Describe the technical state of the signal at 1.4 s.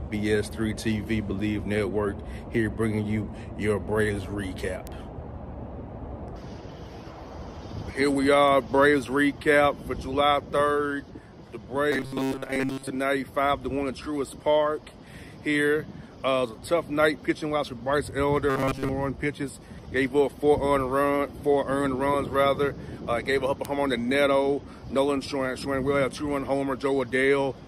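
At 1.4 s the signal is intact, with no audible technical fault at that point.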